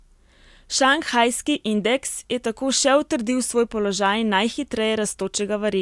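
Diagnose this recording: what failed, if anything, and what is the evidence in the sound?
Nothing in this recording points to a failure at any stage. No part of the chain, from capture through to playback, leaves an audible mark of trouble in the sound.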